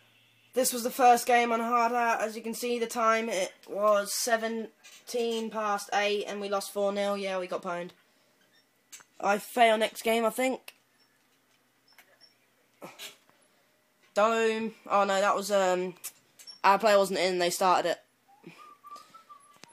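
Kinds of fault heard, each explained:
No audible faults detected.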